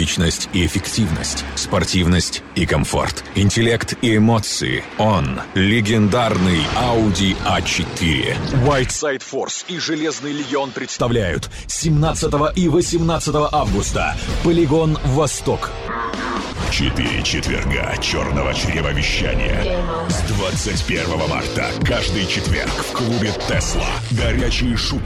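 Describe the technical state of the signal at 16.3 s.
At 16.3 s the signal is intact, with no audible fault at that moment.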